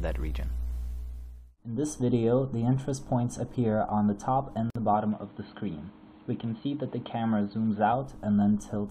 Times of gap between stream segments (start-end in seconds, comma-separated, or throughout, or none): 4.70-4.75